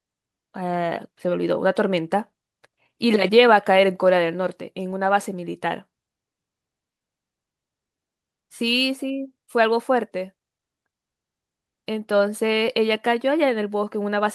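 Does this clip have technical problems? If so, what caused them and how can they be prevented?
No, there are no technical problems in this recording.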